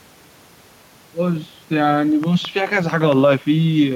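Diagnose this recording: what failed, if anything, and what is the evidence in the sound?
A train of clicks runs from 2.24 to 3.13 s: about five sharp ticks at a regular 4.5 per second, poking slightly above the speech. A spectrogram shows evenly spaced thin vertical lines across the band, and the waveform shows matching spikes. The likely source is interference in the analogue wiring.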